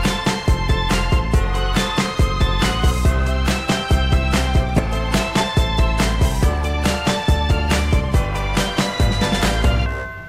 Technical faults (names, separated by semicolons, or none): damaged data in a compressed stream